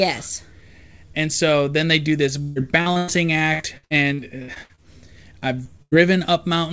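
Repeated packet loss (robotic sound) hits at 2.42–3.10 s, right after "then they do this", again at 3.54–4.80 s and at 5.40–5.93 s. Missing stretches, up to about 137 ms, are filled by stretching the last sound, giving choppy speech with pieces missing.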